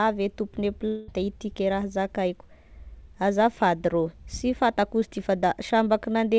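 At 0.88 s the stream likely suffered a long network dropout, with no audio arriving until 1.10 s. The receiver bridged the gap by extending the last bit of speech, so for about 0.2 s a fading buzz replaces the speech with no stretch of true silence. Speech then resumes with the lost portion simply gone. Throughout, the call path's G.722 coding at 64 kbps leaves nothing above 8 kHz.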